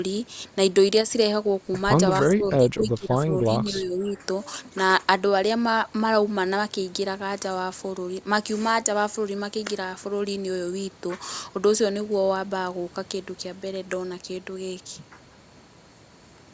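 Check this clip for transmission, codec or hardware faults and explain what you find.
Two call-path faults turn up close together early in the speech.

Between 2.23 and 4.11 s the speech dips and breaks up in pieces, falling by as much as about 15 dB for roughly a second in total. This is speech suppressed in double talk: with both sides talking at once, the echo canceller likely could not tell this talker from loudspeaker echo and turned both down.

From 2.80 to 2.85 s a faint scrap of delayed voice sits about 15 dB below the speech, trailing by 292 ms. This is an echo leak: the far end likely plays the call on a loudspeaker, and its canceller let some of the pickup return.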